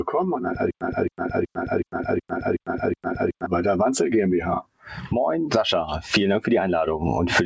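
From the start and running the full length, a noise suppressor applied to music or sounds keeps working against the material. It was tuned for speech, so it reads sustained tones, ambience and reverb as noise and pulls them down by about 5 dB, while transients pass largely intact. The level rides up on each attack and sinks through held portions and tails, giving a pumping, fluttering and thinned-out quality. The top of the band stops at 8 kHz, consistent with a G.722 call path.

Between 0.71 s and 3.46 s there is a stutter with silent gaps. A fragment about 270 ms long plays, then drops to digital silence for roughly 100 ms, and the same fragment returns, seven times in all at an even 0.37 s spacing. This is likely a stalled player or stream retrying: each attempt replays the last buffered piece and then runs dry. Whatever audio belonged in that stretch never arrives.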